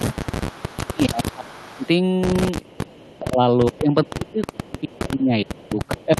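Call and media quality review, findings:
Speech suppressed in double talk, 0.0–1.85 s and 2.85 s to end: level dips up to around 25 dB, ducking while the far side talks. Likely echo canceller or suppressor gating near-end speech during overlap.

Echo leak at 0.18–1.88 s, 2.65–3.19 s, 3.74–4.99 s and 5.62–5.69 s: faint delayed copy about 25–30 dB down, lagging 430–450 ms. This is a discrete repeat, not room reverb tail. Likely incomplete cancellation at a loudspeaker endpoint. The band is limited near 12 kHz by the Opus path.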